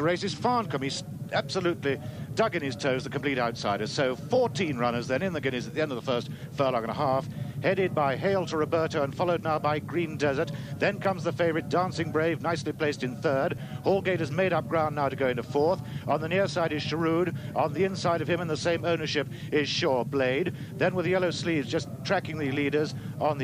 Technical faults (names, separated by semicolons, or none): block of digital silence